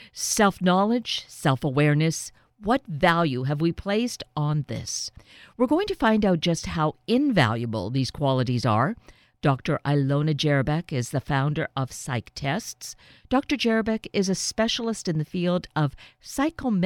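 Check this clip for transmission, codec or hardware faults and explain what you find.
No faults can be heard anywhere in this recording.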